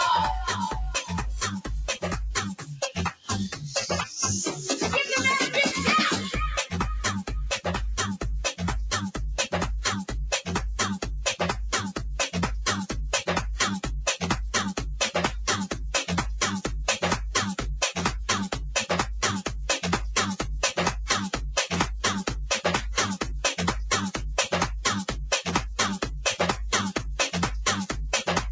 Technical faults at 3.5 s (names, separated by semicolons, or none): noise suppressor applied to music or sounds; sound cut by the noise suppressor